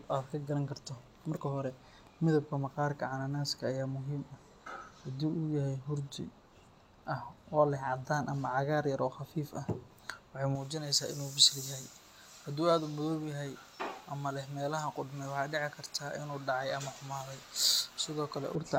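From 10.55 s to 18.55 s the speech takes on a thin, glassy brightness, and that's pre-emphasis left on. Somewhere in the chain the treble got boosted ahead of transmission, and the matching de-emphasis on the way out never happened. The shape fits a J.17 curve, with 10 kHz sitting about 11 dB above 1 kHz, so sibilants hiss sharply and the lower body of the speech feels hollowed out.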